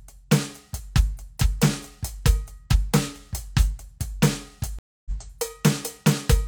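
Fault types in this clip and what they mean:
Stream reconnect: the connection dropped, playback went silent, and a fresh decoder picked the stream up partway through. In this music the gap runs from 4.79 to 5.11 s, with about 0.27 s of silence, and the music returns roughly 150 ms further on than where it broke off. The waveform shows a flat line at zero before the music fades back in, and the spectrogram shows a blank vertical band across every frequency.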